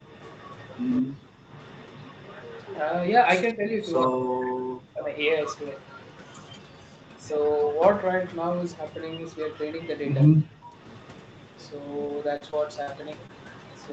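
From 0.06 to 3.9 s, a faint delayed copy of the speech trails the talker by about 189 ms, at about 25 dB below it. This is an echo leak. The far side's echo canceller likely let through some of what its microphone picked up from its loudspeaker.

Speech suppressed in double talk follows. At 1.02 to 1.1 s, from 3.54 to 5.13 s, and from 10.28 to 10.76 s, the talker's level drops deeply or cuts out. The canceller likely mistook overlapping speech for echo and turned everything down. The middle dip lasts about a second.

From 1.38 to 1.45 s, the room sound drops by about 24 dB for a brief moment, then returns. This is background gated by the echo canceller, which clamped the microphone while the loudspeaker played.

The echo leak returns from 5.43 s to the end, a little quieter at about 30 dB below the speech, still about 189 ms late. The same canceller shortfall is likely behind it again.

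From 12.07 to 12.89 s, repeated packet loss gives a choppy stretch with pieces missing. Four holes totalling about 120 ms, the longest 42 ms, are patched by stretching the last sound. The patches come close together, so the speech sounds broken.

At 13.27 to 13.31 s, a short concealed packet loss of about 20 ms leaves a brief smear or wobble. The receiver bridged the hole by extending the preceding sound, then blended back. Like the rest, it sits within an 8 kHz band-limited call sound.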